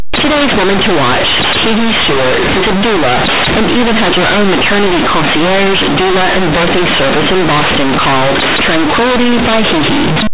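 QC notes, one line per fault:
Throughout: companded audio read as linear. A-law bytes play as raw 8-bit samples with no expansion, so each sign change swings across half the range and quiet parts match the peaks. Unlike ordinary clipping, which spares quiet passages, the pauses buzz as loudly as the speech.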